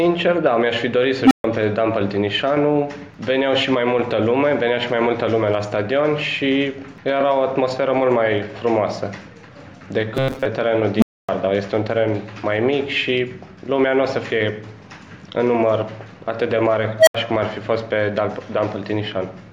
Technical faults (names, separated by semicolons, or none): unstable filter; robotic sound from repeated short buffers